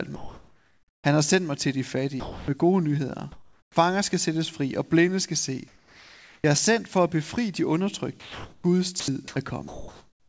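From 0.16 to 1.04 s the real background is replaced by comfort noise: a steady, featureless hiss sitting about 39 dB below the loudest speech and about 4 dB quieter than the room tone it replaces. The likely cause is discontinuous transmission. The sender's voice detector heard no speech and stopped sending, so the receiver synthesised roughly shaped noise to fill the gap. Like the rest of the clip, the noise carries nothing above 8 kHz, which fits a wideband call codec such as G.722.

At 2.20 to 2.48 s the voice detector drops sound. About 0.2 s of speech gives way to that same flat noise before the signal resumes. The likely cause is the detector classing low-level speech as background.

Comfort noise fills the background again from 3.32 to 3.76 s, about 37 dB below the loud passages and about 3 dB down, and the likely cause is again a detector-driven pause. At its end, around 3.74 s, the onset is clipped by the voice detector. 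Roughly 20 ms of the incoming sound is missing, so it starts abruptly without its soft attack, likely because the detector reacted late.

Two more drops by the voice detector follow. From 5.68 to 6.44 s about 0.42 s of speech is replaced by synthetic noise. From 8.20 to 8.64 s about 0.17 s is lost. The likely cause in both is quiet speech falling under the detector's threshold.

Between 9.00 and 9.36 s the speech is chopped by the voice detector. Short pieces totalling about 0.16 s are swapped for fill, which makes the sound choppy. The likely cause is the detector toggling repeatedly near its threshold.

From 9.68 s to the end, comfort noise again stands in for the background, about 40 dB below the loudest speech and about 1 dB quieter, with a detector pause as the likely cause.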